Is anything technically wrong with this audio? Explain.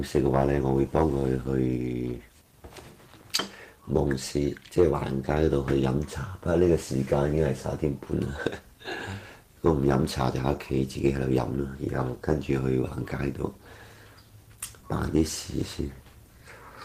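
No, nothing technically wrong is audible anywhere in this audio.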